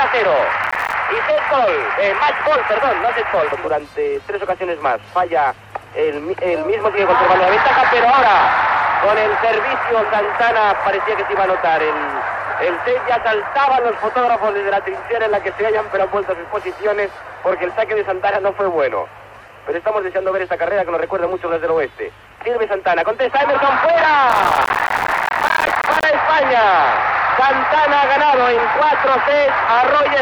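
Processor overload crackle appears from 0.64 to 0.94 s, and again from 24.30 to 26.04 s. The processor misses its buffer deadlines many times in a row. Each miss leaves a hard-edged slice of silence. The gaps fit buffers of about 5 ms. The longer second burst sounds like gritty tearing.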